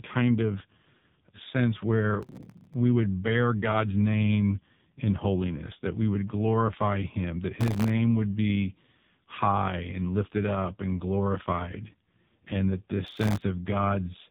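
Throughout, the speech sounds buzzy, synthetic and muffled, with nothing above 3.8 kHz, which fits the AMR narrowband mobile codec running at a low bitrate near 6 kbps.

Gritty crackle tears through the sound from 2.23 to 2.74 s, after "sense where" and before "we would bear"; from 7.61 to 7.90 s, after "would glorify him that" and before "would be high"; and from 13.07 to 13.42 s, after "glorified and that this". This is processor overload crackle: dozens of sub-millisecond buffers missed their deadlines, each leaving a tiny silent gap.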